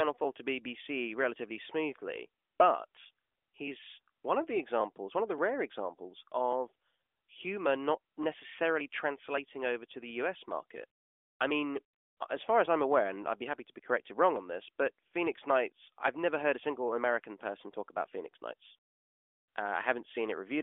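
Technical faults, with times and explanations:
Nothing in this speech stood out as a problem on careful listening.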